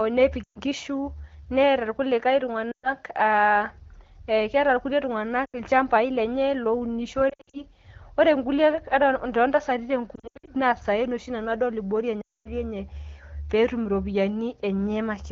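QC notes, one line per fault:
0.43–0.58 s, 2.71–2.90 s, 5.46–5.55 s, 7.29–7.62 s, 10.15–10.50 s, 12.21–12.49 s: lost AMR speech frames. The decoder fills each gap by repeating the last good pitch and vocal tract settings at falling gain. In gaps of 120, 120, 80 and 240 ms the sound drops to near silence within two frames, then returns weak or rough. At 7.29 s and 10.15 s the losses scatter in short runs over 240 and 320 ms. The wideband codec's clear speech between these events fits AMR-WB.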